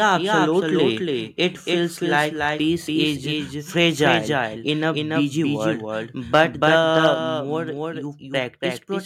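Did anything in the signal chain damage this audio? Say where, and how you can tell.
Yes. A doubled audio track runs through the whole clip. It was likely caused by the capture or call-processing stage picking up the signal twice. A full-band copy about 5 dB quieter trails by roughly a third of a second. On a spectrogram every pattern reappears, fainter, that far to the right, with no reverberant smear.

Microphone overload occurs at the converter, at 6.34 to 6.41 s just after "in a busy world", about 3 dB over, and again at 6.96 to 7.07 s, about 1 dB over. The input gain was likely set too high. The waveform shows flattened tops on the loudest peaks, and the spectrogram shows a harsh, crackling spray of high-frequency energy.

Microphone volume stepped down at 7.14 s, right after the second clipped stretch. The call processing likely reacted to the overload by cutting the device's input gain. 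Sound and background fall together by about 4 dB at once. On a waveform the envelope drops as a clean step.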